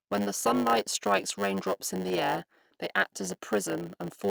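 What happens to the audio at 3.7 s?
At 3.7 s you're hearing the block size mismatch (padded) that runs through the whole clip: short blocks get zero-filled gaps, giving a 100 Hz buzz and speech slowed to about 0.92x.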